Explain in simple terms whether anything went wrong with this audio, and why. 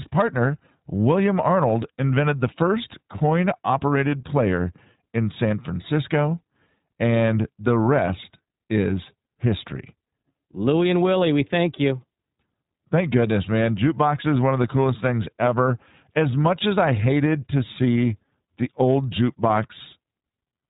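From start to finish, the speech has passed through the iLBC codec, a compressor built for internet phone calls. Nothing above 3.8 kHz survives, so it sounds narrow and muffled. Each short slice is coded on its own, which fits 20 ms frames. That leaves a clearly rough, slightly synthetic edge.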